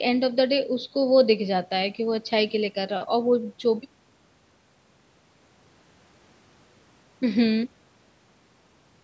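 No technical faults can be heard in this speech clip. It has passed through a call's microphone processing, which trims away the lowest bass and leaves nothing above 8 kHz, as expected for that path.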